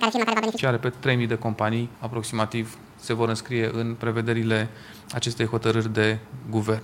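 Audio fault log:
0.00–0.58 s, audio read two samples at a time (double speed): sample pairs are taken as single frames, so the sound plays at 2x speed and 12 semitones up. The spectrogram shows harmonics an octave higher; the waveform looks squeezed in time.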